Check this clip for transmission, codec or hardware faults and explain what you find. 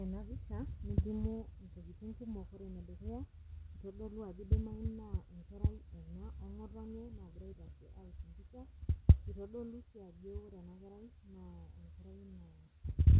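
No faults can be heard in this speech recording, which arrives through a call path whose content stops at 4 kHz, a narrowband character that fits G.711 mu-law coding at 64 kbps, carrying only the ordinary coding noise of that codec.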